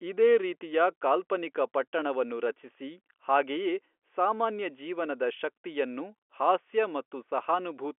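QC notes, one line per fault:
No faults are present: the signal sits within the telephone band of G.711 mu-law coding, with content confined to 300 Hz to 3.4 kHz and nothing above 3.6 kHz.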